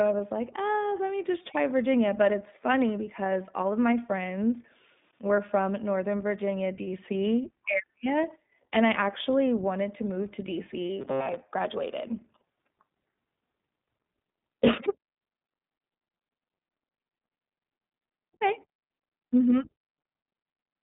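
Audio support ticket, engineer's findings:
iLBC codec, whole clip. Speech is band-limited to roughly 150 Hz to 3.7 kHz, with nothing above 3.8 kHz. Plainly audible roughness and a synthetic edge. Each 20 ms frame's excitation is coded on its own, without reference to the previous frame. The frame structure fits iLBC's 15.2 kbps mode. The loss of upper band and excitation detail accounts for the dull, slightly rough speech.

Robotic sound from repeated short buffers, 11.01 to 11.42 s. Speech collapses into a rigid metallic buzz at 134 Hz that still loosely tracks the speech. Likely cause: playback underrun, with the last buffer replayed while new audio is late and roughly half the real audio skipped. The repeat interval is about 7.5 ms, which sets the fixed buzz pitch.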